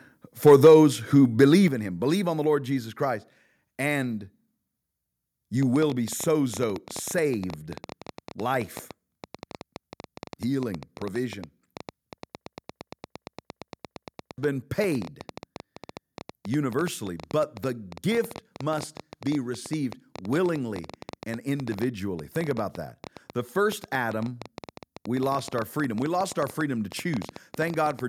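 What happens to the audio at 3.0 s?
Nothing goes wrong at 3.0 s; the speech carries on intact through that moment, with no dropout, click or other fault.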